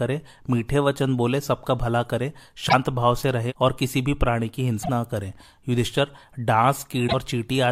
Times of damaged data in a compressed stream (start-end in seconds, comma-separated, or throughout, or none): 2.65-2.73, 4.79-4.89, 7.04-7.14